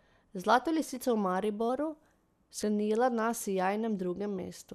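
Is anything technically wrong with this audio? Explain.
Yes, there are two faults. From 1.69 to 2.47 s, the speech runs about 5.9% fast and a semitone sharp, then snaps back. This is likely a drift correction step resampling to rebalance a buffer. At 2.60 to 2.63 s, a brief glitch comes from damaged data in a compressed stream, where the decoder loses frame sync.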